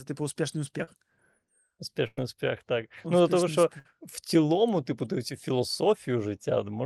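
Short concealed packet loss at 0.83 to 0.89 s: about 40 ms of the speech never arrived in time, so the receiver extended the preceding sound for roughly 36 ms and blended back into the real signal, leaving a brief smear where a small piece of speech goes missing. Bursts of packet loss follow at 2.07 to 2.19 s and 3.79 to 3.87 s, with about 100 ms and 60 ms lost. Each gap is bridged by the previous sound held and faded, heard as a short buzz or dying hiss, before speech resumes with the intervening material gone.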